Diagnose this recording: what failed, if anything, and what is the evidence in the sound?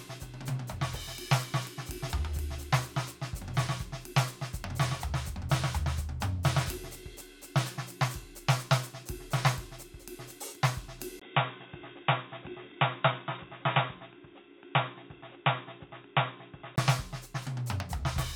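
Looks like the input switched to a poorer device. At 11.2 s there's a 20 ms dropout, then the music goes dull and boxy with nothing above 3.8 kHz, plus a new noise floor about 35 dB down, until it clears at 16.8 s. Level barely moves. That's likely a driver-level device change.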